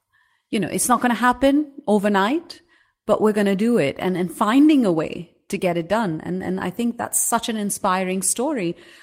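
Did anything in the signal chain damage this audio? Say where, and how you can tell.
No, nothing in this speech recording points to damage at any stage of the signal chain.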